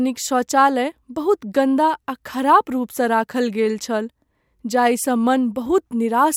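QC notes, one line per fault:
Nothing stood out on listening to this speech recording.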